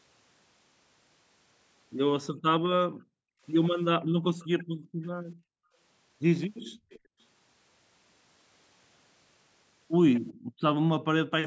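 From 2.34 to 5.77 s, the background gated by the echo canceller drops in and out. While the far end plays on a loudspeaker, the canceller turns this microphone down hard, by up to about 40 dB. The room sound vanishes for a total of roughly two seconds, then returns when the canceller releases. Two brief echo leaks fall inside this stretch, at 4.39 to 4.47 s and 5.03 to 5.08 s. Each is a faint copy of the speech, 381 ms late, some 30 to 35 dB below it. It is likely residue the canceller failed to remove and sent back.

The gating returns from 6.64 to 7.19 s, silencing the background for about half a second. An echo leak sits within it, from 6.9 to 7.0 s, louder at around 25 dB down. It has the same 381 ms delay.

At 10.27 to 10.34 s comes the strongest echo leak, only about 20 dB under the speech. The gating follows at once, from 10.34 to 10.6 s, and the room sound drops out for roughly a third of a second. 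The call's microphone processing shows in a bandwidth that stops at 8 kHz.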